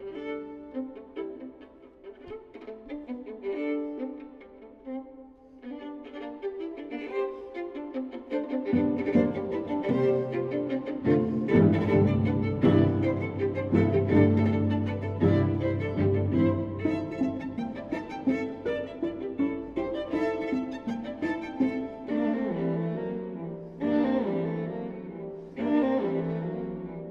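No technical faults can be heard anywhere in the audio. There is no moment in the sound that calls for comment.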